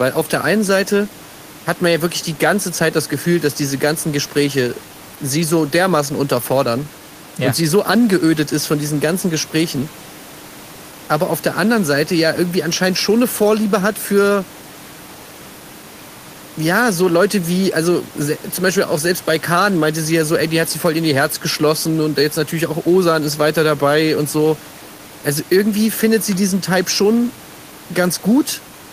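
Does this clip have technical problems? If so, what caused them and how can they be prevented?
No, there's nothing technically wrong to fix here, just a bit of the room's own background noise sitting about 23 dB under the speech, which is part of the recording rather than anything the system did.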